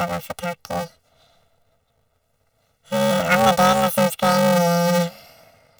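Throughout, the speech buzzes robotically at about 345 Hz. This is planar audio read as interleaved. Each 2.9 ms block, which fits 128-sample blocks, plays twice at double speed.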